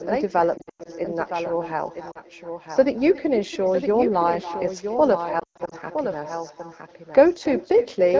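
Throughout, every phrase is shadowed about a third of a second later by a quieter, thinner copy, roughly 15 dB down. This is echo with no canceller: the far end's loudspeaker feeds its microphone and nothing removes it.

A second, cleaner copy also runs about a second behind, perhaps 10 dB quieter, with no room colour. This is a doubled audio track, likely from a second, slower capture path.

From 0.58 to 0.89 s, 2.11 to 2.20 s and 5.39 to 5.75 s the sound dips, warbles and briefly smears, then returns weak and rough. These are lost AMR speech frames: the wideband decoder stretches the last good frame with falling gain, and in the longest runs of about 0.1 s the sound nearly fades out.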